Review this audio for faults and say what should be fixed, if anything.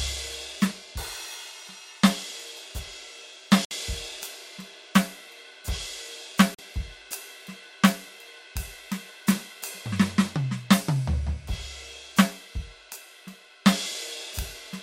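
The music cuts to silence twice, from 3.65 to 3.71 s (61 ms) and from 6.55 to 6.59 s (41 ms), then resumes further along as though it had kept playing underneath. This is likely a Bluetooth dropout: audio packets reached the headphones too late and were discarded, leaving gaps until valid packets arrived. Keeping the source close to the headphones, clear of obstructions and 2.4 GHz interference, would prevent it.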